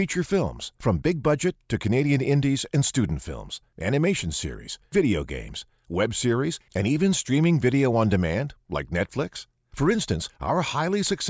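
No technical faults can be heard anywhere in the speech, and the signal stays continuous and steady throughout.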